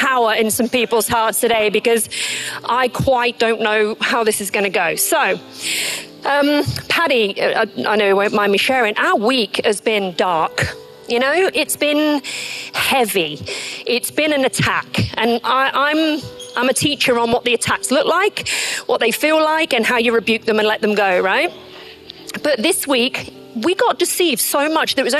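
Throughout the clip the sound is dull, with the top end missing and a granular, gurgling roughness on what remains. This points to MP2 compression, likely at a low rate around 80 kbps: too few bits leave upper sub-bands switched off, and the surviving bands are coarsely quantised. Unlike the bursts below, this damage is steady and constant, part of every moment.

DAB burbling breaks out at 1.38 to 1.66 s, 11.38 to 11.78 s, 17.10 to 17.52 s and 21.65 to 22.48 s, the last the longest. Bit errors, at a small fraction of a percent, get through error correction and corrupt samples and scale factors, so single sub-bands jump in level frame by frame. The result is short blips of noise in single sub-bands, brief and intermittent, unlike the ever-present dullness of the compression.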